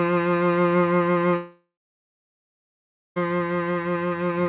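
From 1.36 to 3.19 s the music collapses into a fading buzz, then about 1.4 s of silence, likely a long network dropout, before resuming with that passage lost.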